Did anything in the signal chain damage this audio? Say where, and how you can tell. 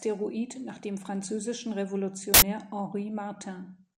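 Yes: at the driver or buffer stage, an uninitialised buffer played leftover memory as samples from 2.34 to 2.42 s, an 80 ms burst of loud digital noise.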